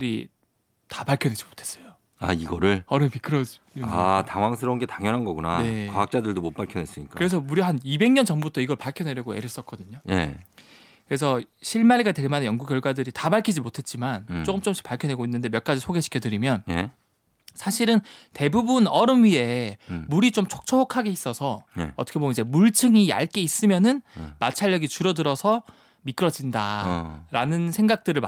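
This speech clip has a single sharp loud pop at 8.42 to 8.44 s. It lands on top of the speech, which carries on underneath, and it stands out by roughly 10 dB above the surrounding sound. The likely cause is a sudden electrical step or pulse, from a plug, a switch, static discharge or a driver glitch, entering the signal chain. The circuits that follow shape that impulse into the brief burst heard as a pop.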